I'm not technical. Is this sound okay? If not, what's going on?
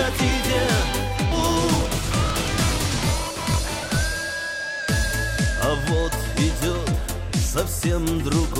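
No. There are three separate problems.

First, a skip ahead at 1.31 to 1.33 s. Somewhere along the way roughly a second of audio was thrown out, either lost in transit or discarded because the receiving end's holding area was overfull. Playback jumps straight from before the gap to a point about a second later, with no silence to mark it. You simply lose that stretch, and the two sides are stitched together abruptly.

Second, a block size mismatch (truncated) from 1.70 to 4.03 s. One stage of the system likely hands over audio in chunks larger than the next stage picks up, so the tail of every chunk is cut off and discarded. Those regular cuts make a low buzz at about 47 Hz, roughly a deep hum. Because part of each chunk is missing, the sound also rushes along about 1.12 times faster than normal, while keeping its usual tone.

Third, a jitter buffer speed-up from 6.54 to 7.46 s. The receiver had built up more waiting audio than it wants, so to catch up it snipped out many tiny slivers, about 40 ms in total. 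This makes that passage play at about 104% speed. The pitch stays the same.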